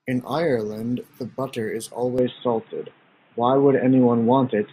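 Input switched to a poorer device, likely, at 2.18 s in this speech recording: the sound turns dull and boxy until the end, with nothing above 3.8 kHz, a level shift of roughly 5 dB, a faint new noise floor, and no gap at the change.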